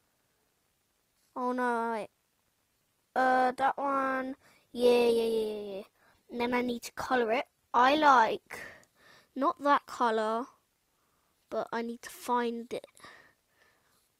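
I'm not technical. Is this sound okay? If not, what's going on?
No. From 2.69 to 8.69 s there's an adaptive stream at a lower bitrate: the connection slowed, so a thinner, duller, artificial-sounding version played, then switched back without a gap.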